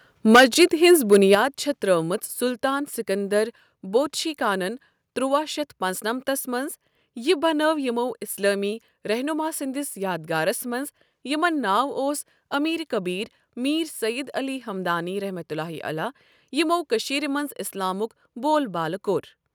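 From 0.34 s to 1.35 s the speech shows microphone overload. The loudest syllables carry a harsh, crackling edge, and the waveform tops are flattened on a few percent of samples. The likely cause is an input level set about 10 dB too hot, so the peaks run past the converter's ceiling and are sheared off. That squaring of the peaks adds dense odd harmonics that were never in the original speech.

Within that stretch, at 0.36 s, the microphone volume stepped down: speech and background together drop by about 4 dB in a single step. Most likely the call software detected the clipping and reduced the device's input gain. The distortion continues after this first cut. At 1.35 s, as the overload ends, a second step of about 7 dB brings the level down again. The reduction is abrupt rather than faded, so it registers as a sudden loss of loudness.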